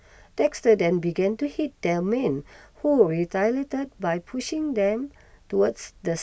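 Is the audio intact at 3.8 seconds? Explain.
Yes, at 3.8 seconds the speech runs on without any audible dropout, click, distortion or other fault.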